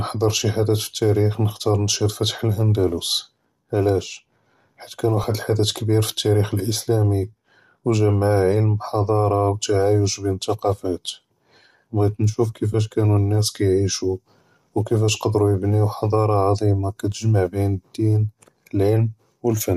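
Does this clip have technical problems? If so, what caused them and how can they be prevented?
Yes. Two short lost LE Audio frames dropouts occur in this speech. At 5.22 s, between "ועלאש חית כאן" and "לחדת כביר", about 15 ms is concealed, which fits two 7.5 ms frames. At 12.73 s, after "בעית נשוף" and before "כאנו אלנאס כיעישו", about 7.5 ms fits a single frame. The LC3 decoder filled each gap by repeating the last spectrum with randomised phase, so the sound smears briefly into noise. On a spectrogram this appears as a thin vertical slice where harmonic lines blur into diffuse energy. On the waveform, the periodic cycles give way to an irregular, noise-like stretch without a full drop to silence. The light grainy edge from the link's compression is likely LC3 at 64 kbps. To prevent the dropouts, keep the Bluetooth link strong and free of interference, or allow retransmission and a larger jitter buffer.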